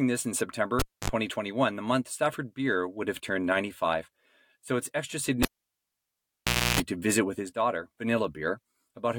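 Cable pulled and plugged in at 0.79–1.10 s and 5.43–6.80 s interrupts this speech clip. Each time a pop is followed by near silence, about 0.26 s after "this in" and 1.32 s after "it's extra", before a second pop brings back "to visit with his". While only the plug tip made contact, mains buzz leaked in, about 0.06 s at 50 Hz in the first event and 0.3 s at 60 Hz in the second.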